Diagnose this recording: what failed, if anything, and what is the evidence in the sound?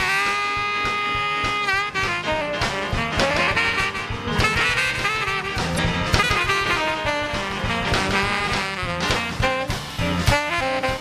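A doubled audio track runs from 3.27 to 8.63 s. A full-band copy trails by roughly 150 ms, a few dB quieter, likely from a second capture path.

Damaged data in the compressed stream causes short blips at 5.75–5.79 s and 9.95–9.99 s. The decoder misreads corrupted frames and resynchronises at the next header.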